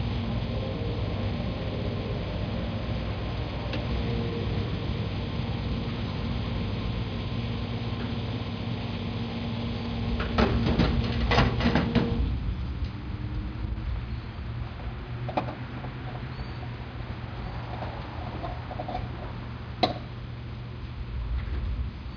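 No technical faults are audible.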